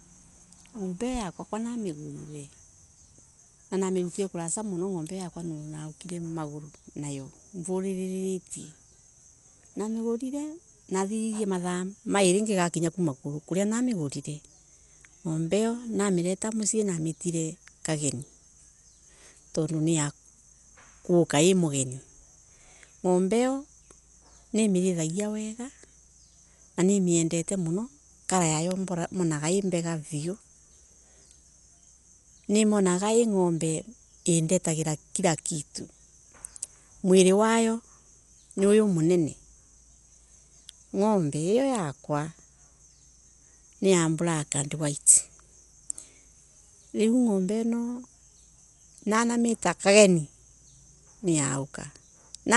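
From the start the speech sounds dull and gritty, with nothing above 11.5 kHz; that's likely Dolby Digital compression, fitting a starved 64 kbps encode filling bands with noise. Then there's a bit error spike at 6.09 s and another at 28.71 s, each a single sharp tick where a flipped bit briefly threw the sample value off.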